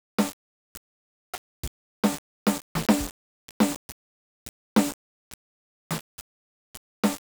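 From the start the music sounds grainy and gritty, which points to likely low bit depth without dither, around 4 bits. Rounding error follows the signal, roughly 15 dB down.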